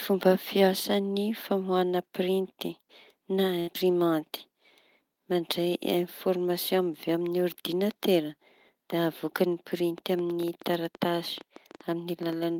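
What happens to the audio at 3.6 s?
The speech briefly smears into a held, fading continuation of its last sound from 3.59 to 3.69 s. It then jumps ahead with about 80 ms missing, the mark of a burst of packet loss concealed by the receiver.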